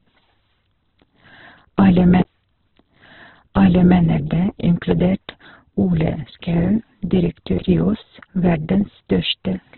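Speech, and the whole clip carries heavy Opus compression damage. Nothing is present above about 4.3 kHz, so it sounds narrowband and muffled, with a rough, grainy texture in place of clean tones. The likely cause is music-mode coding at a very low bitrate, roughly 8 kbps.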